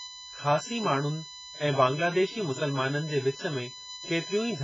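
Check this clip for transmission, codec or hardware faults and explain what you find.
Two faults run through the whole of this speech recording: a steady electrical whine and heavy lossy-codec damage.

The whine is USB whine, a fixed tone on a 1 kHz fundamental whose strongest component sits at 4 kHz, roughly 15 dB below the speech. USB traffic runs in 1 ms frames, and the current drawn on each frame leaks into the audio through shared power or ground, so the whine lands on exact multiples of 1 kHz. That spacing, and its high, thin pitch, set it apart from mains hum, which sits at 50 or 60 Hz.

The codec damage leaves nothing at all above 7.5 kHz, and the speech sounds dull and smeared, with a watery warble on held vowels and fizzy, blurred sibilants. The likely cause is AAC-LC at a very low bitrate, consistent with around 12 kbps. Starved of bits, the encoder drops the top band and coarsely quantises what remains. 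The moving, watery texture is what distinguishes codec damage from a plain low-pass filter, which would only dull the sound.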